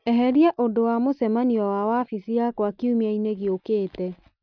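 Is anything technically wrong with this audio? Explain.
No, nothing technical stands out here, and this short bit of speech comes through without anything that needs flagging.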